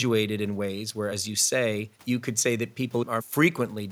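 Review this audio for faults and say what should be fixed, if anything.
Nothing needs fixing here; listening through the speech, there's no fault to flag and nothing to prevent.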